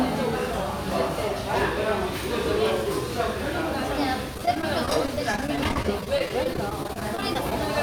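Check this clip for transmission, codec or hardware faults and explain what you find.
There's one problem, from 4.34 to 7.52 s: repeated packet loss giving a robotic sound. Dozens of short holes, none longer than about 27 ms, get patched by stretching the preceding audio, covering roughly 14% of that stretch, so it turns choppy with pieces missing.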